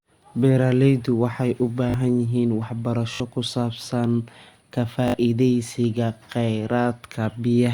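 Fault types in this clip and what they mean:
Repeated buffer: three brief stutters where a slice of speech repeats in 20 ms steps with hard joins, as the last buffer replayed while new audio ran late.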